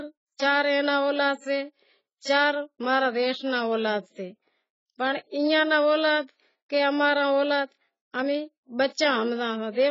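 AAC compression runs through the whole clip. The speech stops dead above 7.7 kHz and sounds dull and heavily smeared, likely because the encoder discarded and coarsely quantised frequency lines to fit a very low bitrate, around 16 kbps.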